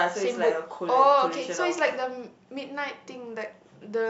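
No technical faults are audible.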